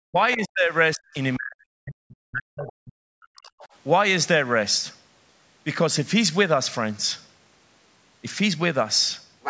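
Speech that dips sharply, sometimes by about 40 dB, at 0.06–0.18, 0.35–0.73, 0.95–1.21 and 1.37–3.51 s, is speech suppressed in double talk, likely the echo canceller turning down its own talker along with the loudspeaker echo while the two overlap. A second voice, about 20–25 dB down at 0.33–0.46, 2.67–2.72 and 3.50–3.67 s and only about 5 dB below from 9.42 s to the end, is the other side's voice leaking through, likely uncancelled loudspeaker echo.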